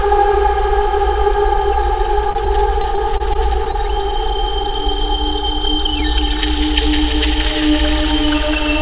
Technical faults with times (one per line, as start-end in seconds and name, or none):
2.30-3.76 repeated packet loss (robotic sound)